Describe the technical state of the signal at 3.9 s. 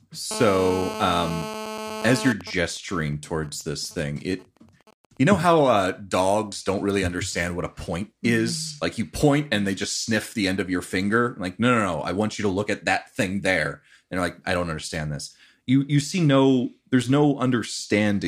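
At 3.9 s the speech is overlaid by GSM signalling bursts, which run from 2.41 s to 5.53 s. A nearby 2G phone in a call whose user is silent transmits only sparse groups of radio bursts, and the audio circuitry rectifies that RF into the signal. The result is even ticks at about 217 Hz with a longer buzz twice a second, sitting roughly 25 dB below the speech.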